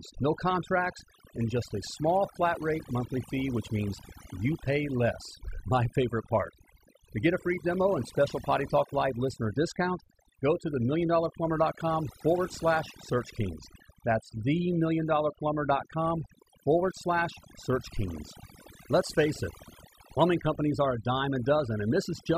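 From start to finish the speech carries overdone noise removal. A noise reduction process was set too aggressively for a noisy source, so any frequency band sitting close to its noise estimate is pulled far down or switched off entirely, and the quieter components of the voice are removed along with the noise. Between phrases the background drops to near silence scattered with twinkling specks.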